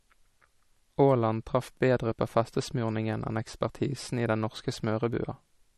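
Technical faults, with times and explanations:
Throughout, MP3 compression: the speech has a hard treble ceiling with nothing above 12.1 kHz, and a watery, swirling texture as weak frequency components flicker between frames. The damage is plainly audible and likely comes from a low bitrate, around 40 kbps.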